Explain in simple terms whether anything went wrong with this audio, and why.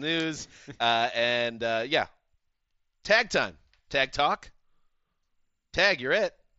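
Nothing went wrong with this audio.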